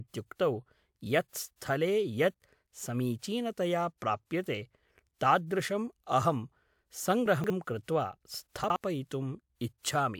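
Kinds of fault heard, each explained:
Chunks out of order: 60 ms blocks of the speech arrived late and played after the blocks meant to follow them. Nothing is lost, but the order breaks, giving a jumbled moment from 7.26 to 7.5 s (three chunks late) and from 8.64 to 8.76 s (one chunk late).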